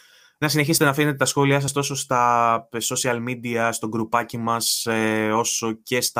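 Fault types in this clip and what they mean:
Dropped buffer (overrun): at 0.78 s and 1.68 s the speech jumps ahead by roughly 20 ms, likely buffers lost before reading; waveform shows abrupt splices, spectrogram thin vertical lines.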